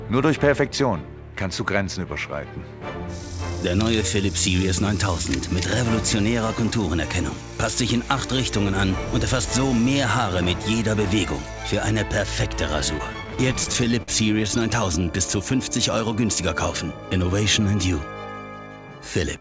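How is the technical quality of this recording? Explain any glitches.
The recording carries the band limit of a call link, with nothing above 8 kHz, which fits G.722 at 64 kbps, and one stretch of repeated stalls (stutter).

From 12.98 to 14.10 s the sound drags and stutters through 11 brief holds, the longest 49 ms, about 158 ms in total, with nothing lost. Packets arrived late, the jitter buffer kept running dry, and each time the receiver stretched the last sound until it could continue.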